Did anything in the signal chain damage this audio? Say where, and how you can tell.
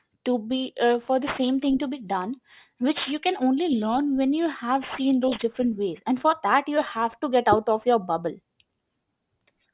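Yes. Sibilants sound gritty and metallic throughout, with energy piling up against 4 kHz. This is aliasing from unfiltered sample-rate conversion, consistent with a drop to 8 kHz.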